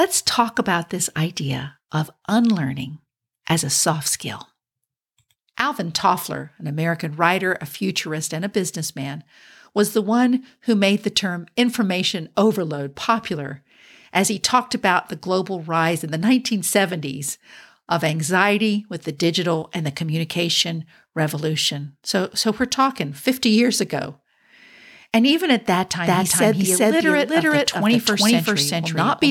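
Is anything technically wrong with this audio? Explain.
Yes. From 26.07 s to the end, the speech has a doubled audio track. A second full-band copy trails by roughly 0.4 s at about the same loudness. It likely comes from a slower second capture path. The echo starts abruptly, with no decay or room colour.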